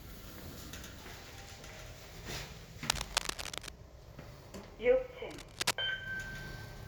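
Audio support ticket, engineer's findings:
Cable scratch noise, 2.89–3.70 s and 5.29–5.74 s: dense, uneven scratching bursts riding a few dB above the sound. Likely a worn cable or connector being moved, its contact resistance fluctuating rapidly. Rustling texture, not isolated clicks or steady hum.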